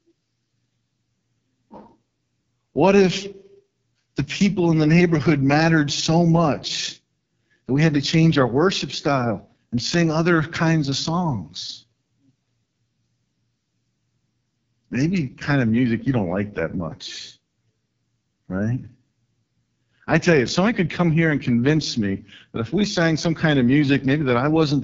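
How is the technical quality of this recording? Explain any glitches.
Technical quality is poor: the whole clip carries the sound of the AMR wideband (HD Voice) codec at its lowest rate. Throughout, speech is rough and raspy, with a buzzy, gritty edge, which fits the lowest AMR-WB mode near 6.6 kbit/s, where the pulse-driven vocal tract model has too few bits to track the signal. Upper content is synthetic noise. A spectrogram shows smeared harmonics below 6.4 kHz, diffuse noise above, and nothing beyond 7.5 kHz.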